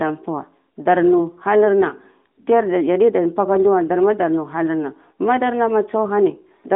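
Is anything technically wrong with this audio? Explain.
No, nothing is technically wrong with this audio.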